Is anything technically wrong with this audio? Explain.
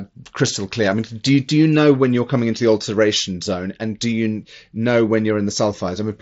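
No, no technical faults found.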